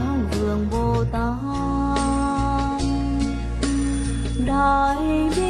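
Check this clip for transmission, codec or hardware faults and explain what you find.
Two faults are present: sample clock jitter across the whole clip, and a digital radio blend to analogue from 1.26 s to 5.11 s.

Sample clock jitter runs throughout. The converter clock wanders by around a microsecond, so samples land slightly early or late and error builds where the waveform changes fastest, roughly 45 dB down. It sounds like a fine roughness that follows loud, bright passages. A spectrogram shows a faint noise haze tracking the signal that disappears in gaps.

Digital radio blending to analogue begins at 1.26 s and ends at 5.11 s, each crossfade taking about 0.41 s. The receiver lost the digital stream and faded over to the FM broadcast, so hiss rises to about 30 dB below the signal. The level itself stays unchanged. On a spectrogram, a grey noise floor fills the section.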